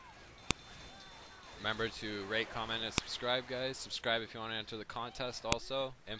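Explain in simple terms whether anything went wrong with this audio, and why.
Yes, something went wrong: there are three sharp clicks, at about 0.51, 2.98 and 5.52 seconds. That's a file header played as audio. Separate pieces got joined without stripping their headers, so those few bytes of file information play back as a loud snap where each new piece begins.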